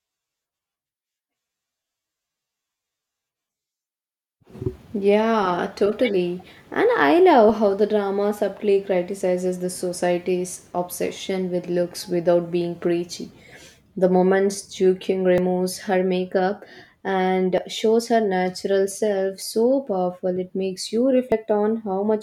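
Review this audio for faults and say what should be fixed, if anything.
Small forward jumps in the speech at 15.38, 17.58 and 19.42 s (about 20 ms skipped) and 21.32 s (about 70 ms), likely dropped buffers (overrun), where unread audio was overwritten. Enlarging capture buffers or prioritising the recording thread would prevent this.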